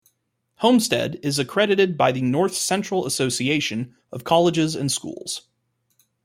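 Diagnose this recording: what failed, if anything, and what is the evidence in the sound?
Nothing in the recording points to a failure at any stage of the chain. The speech comes across without any break, distortion or artefact that would indicate a problem in capture, conversion, transmission or playback.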